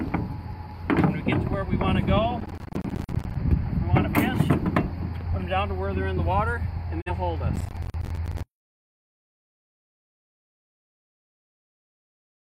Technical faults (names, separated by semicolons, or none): processor overload crackle; digital broadcast dropout